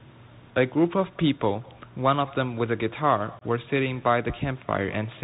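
From the start and all the way through, there's an echo with no canceller. The far end is obviously playing the call over a speaker and its mic feeds it straight back, so every phrase gets a faint, hollow copy trailing roughly a fifth of a second behind, sitting about 26 dB down.

Also running the whole time is the Bluetooth CVSD headset codec, and its damage is plainly audible. Everything's squeezed below 4 kHz, s sounds come out scratchy, louder bright bits crunch where the one-bit slope tracking can't keep up, and a grainy hiss sits underneath, which fits a 64 kbps CVSD link.

Then from 3.39 to 3.43 s there's unconcealed Bluetooth headset packet loss. A few packets between headset and phone went missing, about 22.5 ms in total, and nothing patched the gap. You hear a short hole with hard edges, and the level dips briefly as the audio comes back.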